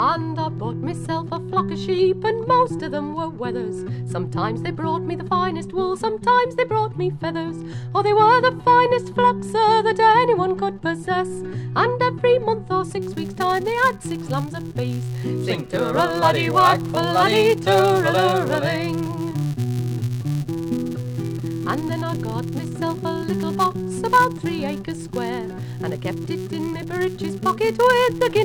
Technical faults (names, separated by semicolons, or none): filter restarted on every block